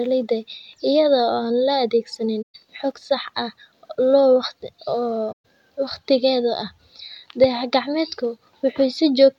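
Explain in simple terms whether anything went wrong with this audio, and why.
Twice the speech briefly vanishes: from 2.42 to 2.55 s and from 5.32 to 5.45 s, each gap lasting about 128 ms. This is AAC frame loss with muting. Chunks of the compressed stream went missing, which fits roughly six lost frames each time, and the decoder filled them with silence. Unlike a plain digital dropout, the sound fades out and back in softly, and nothing is repeated to cover the hole.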